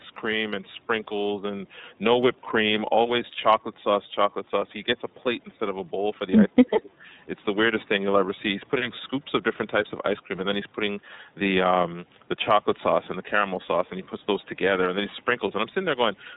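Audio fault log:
Throughout: iLBC codec. The speech is band-limited, with nothing above 4 kHz, and has a plainly audible rough, slightly synthetic edge. Each block of excitation is coded on its own rather than predicted from the one before, and the texture fits 30 ms frames at about 13 kbps. Unlike a generic low-bitrate codec's smeared, watery sound, the grain stays even from block to block, with no warbling carried across frames.
6.47–7.06 s: speech suppressed in double talk. Within this span the speech dips, dropping by around 30 dB at its deepest for a total of roughly 0.4 s. The likely cause is an echo canceller that heard both sides talking at once, could not tell the talker from the returning loudspeaker echo, and turned everything down. Unlike a network dropout, the level dips and recovers.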